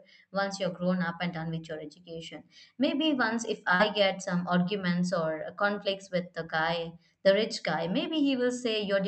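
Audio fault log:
3.75–3.81 s, short concealed packet loss: about 40 ms of the call's audio reached the decoder too late, so the receiver extended the preceding sound to fill the gap and blended back into the real signal, leaving a brief smear.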